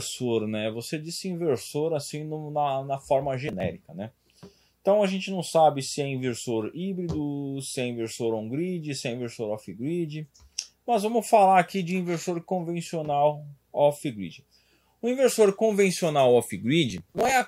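Two bursts of processor overload crackle tear through the sound at 3.48–3.63 s and 16.90–17.31 s, with short hard-edged skips that point to roughly 10 ms buffers being missed repeatedly.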